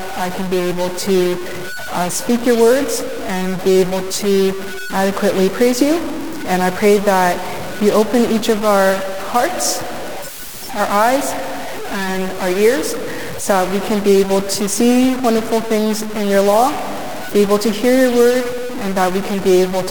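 From start to end, the sound carries harsh, buzzy distortion, a stuck bit. One data bit is likely held at a fixed value, so about half the samples jump by a large step of around -20 dBFS. Even the pauses fill with loud noise.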